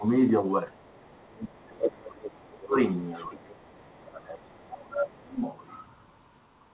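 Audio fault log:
0.00–0.05 s, 0.71–2.75 s, 3.29–5.38 s, speech suppressed in double talk: the talker's level sags by about 15, 30 and 25 dB respectively, likely because an echo canceller clamped down while both sides spoke. On a waveform the envelope pinches inward. A spectrogram shows the harmonics thinning and fading.
2.24–2.28 s and 2.99–3.51 s, other side's voice leaking through: a second, fainter voice slips in, about 15 dB and then about 30 dB below the talker, likely residual loudspeaker echo. A spectrogram shows weak, separate harmonic traces inside the G.711 band, which ends at 4 kHz.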